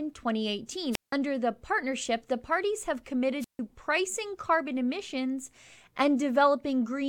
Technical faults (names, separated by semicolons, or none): wireless microphone squelch dropout